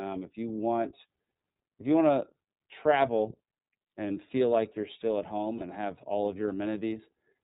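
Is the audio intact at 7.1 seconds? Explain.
No. The iLBC codec runs through the whole clip, so 7.1 s is affected like every other moment. The speech is squeezed through a narrowband coder that cuts everything above 4 kHz and rebuilds each frame's excitation on its own, without carrying anything over from the previous frame. The frame pacing points to 30 ms frames, which fits its 13.33 kbps mode. The damage is plainly audible: dull, band-limited speech with a rough, synthetic grain.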